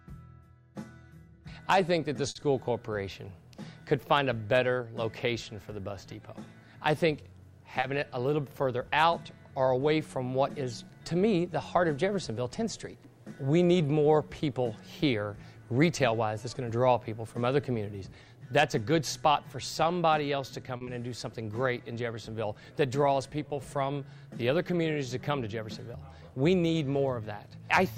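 At 2.29 to 2.37 s a sound is held too long, with a faint buzz or dip, and the same happens at 20.77 to 20.83 s. These are short stalls from a late packet: the jitter buffer ran dry, so the receiver stretched the last sound, 60 ms and then 40 ms, and resumed without skipping anything. Each stall adds that much delay.

At 7.80 to 7.84 s and again at 20.85 to 21.00 s there is a brief smear or wobble. These are short concealed packet losses: 20 ms of audio never arrived in time each time, and the receiver filled it by continuing the preceding sound before blending back.

From 15.81 to 16.70 s the audio runs slightly hurried at unchanged pitch, and again more noticeably at 26.21 to 26.52 s. This is jitter buffer speed-up: with too much audio queued, the receiver trimmed short pitch-period pieces, running at 106% and then 112% and removing roughly 70 ms and 50 ms.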